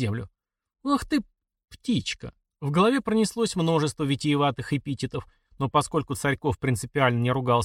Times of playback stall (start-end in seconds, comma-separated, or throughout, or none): none